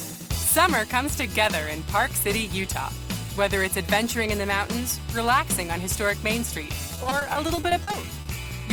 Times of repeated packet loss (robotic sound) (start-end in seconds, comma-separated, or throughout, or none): 6.95-8.27